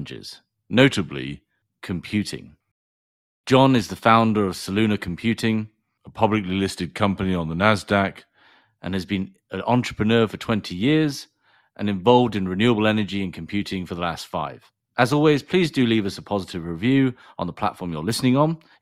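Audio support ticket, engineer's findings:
Drift correction step, likely clock-sync rate change: speech slows about 6.3% and drops 112 cents, roughly a semitone flat, at 0.89–1.41 s and 5.98–8.44 s, then snaps back.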